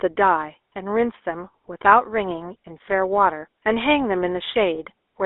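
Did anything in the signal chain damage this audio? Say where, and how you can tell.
Yes. At the codec stage, GSM full-rate coding, which fits 13 kbps, adds buzzy roughness throughout; the spectrogram shows nothing below 300 Hz or above 3.6 kHz.

On the network link, GSM bit errors from 4.75 to 4.77 s cause a brief squawk. The damage is confined to one corrupted frame.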